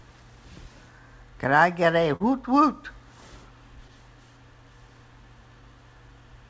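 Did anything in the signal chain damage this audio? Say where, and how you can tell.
Yes. The damage happened at the network stage of the call path: packets arrived too late for the jitter buffer, and the receiver's short concealed packet loss routine filled the gaps. At 2.16 to 2.22 s about 40 ms of audio was missing and about 39 ms was synthesised. At 3.88 to 3.91 s about 20 ms was missing and about 10 ms was filled. Each gap is heard as a brief smear where the last sound is stretched before the real signal blends back in. The audio stops at 8 kHz, which fits a G.722 link at 64 kbps.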